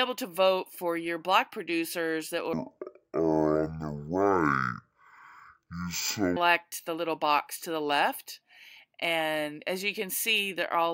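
Stereo read as mono, from 2.53 s to 6.36 s: the interleaved left and right samples are taken one after another as if they were a single channel, so each stereo frame is played as two consecutive samples. The sound runs at 0.5x speed and drops a full octave, 12 semitones down, giving a slow, heavy, dragged quality. A fainter mirrored copy of the sound also appears in the upper half of the spectrum, adding a thin, garbled sheen above the lowered audio.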